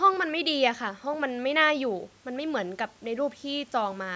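No technical faults are audible.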